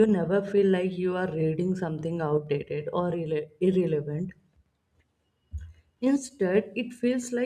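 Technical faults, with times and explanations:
3.74 s, repeated buffer: a tiny click or momentary buzz in the speech as a piece about 5 ms long plays twice with hard joins. Fresh audio arrived late, so the device replayed its last buffer, which fits a 256-sample buffer, and essentially nothing was lost.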